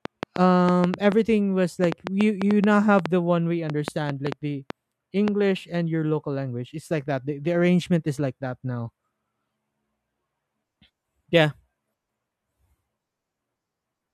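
From 0.05 s to 5.29 s, a train of clicks runs under the speech: around twenty sharp, similar ticks at about 4.2 per second, spaced unevenly and still audible in the pauses. They stand well above the speech, roughly 15 dB over it. The likely cause is electrical interference or a faulty connection or power supply injecting brief pulses. On a waveform they show as thin isolated spikes; on a spectrogram, as narrow vertical lines spanning the full frequency range.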